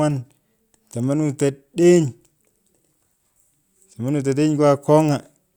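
No technical faults can be heard anywhere in the speech recording.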